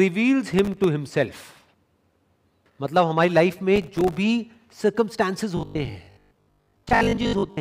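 From 0.54 to 0.84 s, and again from 3.76 to 4.18 s, there is processor overload crackle: buffers only a millisecond or two long miss their deadlines, each leaving a hard-edged silent gap. It sounds like gritty tearing. The waveform shows flat dropouts, and the spectrogram shows dense vertical broadband streaks.

From 5.57 to 7.59 s, the speech turns into robotic sound from repeated short buffers, a rigid 50 Hz metallic buzz. The likely cause is starved playback looping the last 20 ms, with roughly half the audio replaced. The spectrogram shows evenly spaced horizontal harmonics at multiples of 50 Hz.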